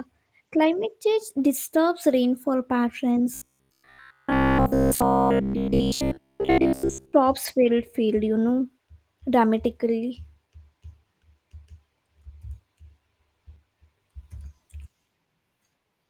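From 3.34 s to 7.13 s the speech collapses into a rigid, metallic buzz at about 66.7 Hz, still loosely tracking the syllables, until normal audio returns just before "field field you know". This is robotic sound from repeated short buffers, likely caused by audio arriving too late, so playback looped the last 15 ms over and over, essentially the whole stretch, while the real signal was skipped. The Opus coding underneath is light.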